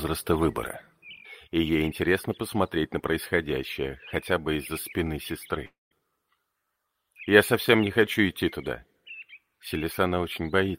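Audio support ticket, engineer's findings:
Long network dropout, 5.65–5.93 s. Audio collapses into a fading buzz, then goes silent for about 170 ms before resuming. About 260 ms of content is lost. Likely cause: packet loss on the network path, with receiver concealment extending the last sound.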